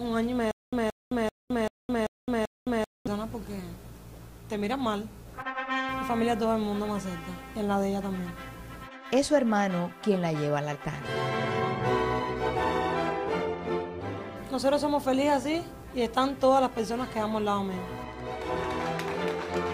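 Stutter with silent gaps from 0.51 to 3.07 s: a 175 ms fragment of the audio repeats six times, each followed by about 214 ms of silence, giving a steady 388 ms cycle. This is likely a stalled player or stream replaying its last fragment at each retry, so the intervening audio is lost.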